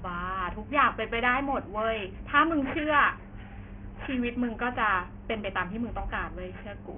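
Aliasing runs through the whole speech clip. The audio was brought down to a much lower sample rate, consistent with a drop from 44.1 kHz to 6 kHz, without an anti-alias filter, so everything above the 3 kHz folding point mirrors back below it as false, unrelated tones. Sibilants come out gritty and metallic, the top of the spectrum crowds right up against 3 kHz, and the folded energy sits only around 15 dB under the speech.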